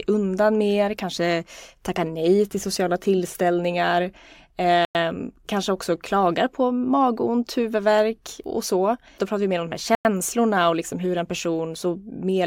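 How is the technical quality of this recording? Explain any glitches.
The speech is broken twice by a gap between chunks, at 4.85 s and again at 9.95 s, each a hole of 100 ms. The chunk length of 5.0 s points to audio handled in fixed 5-second chunks, with silence inserted at each join, likely from codec padding or from playback starting each chunk late. Nothing is lost, but the flow stops for a tenth of a second at each boundary.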